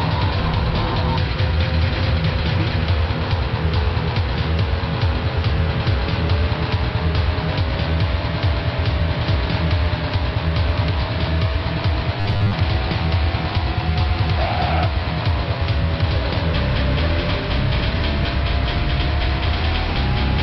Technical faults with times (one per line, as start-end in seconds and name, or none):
12.20-12.54 robotic sound from repeated short buffers